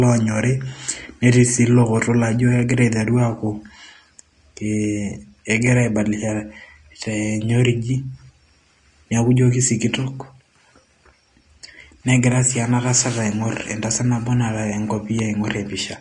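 From start to finish, the speech has likely been encoded with low-quality Vorbis compression, which fits a bitrate near 34 kbps. Nothing remains above 10.6 kHz, and the coarsely quantised treble turns fine detail into plainly audible hiss and grain, roughening tones and blurring attacks.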